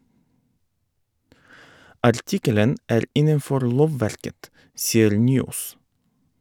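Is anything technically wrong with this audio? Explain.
No, nothing is technically wrong with this audio.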